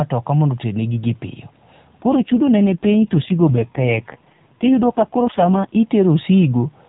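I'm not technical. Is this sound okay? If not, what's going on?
No. From about 2.0 to 5.8 seconds the voice turns rougher and more buzzy, almost robotic, then recovers. This is an AMR rate drop: on this phone-style call, the network squeezed the speech into far fewer bits, likely because of a weak radio signal.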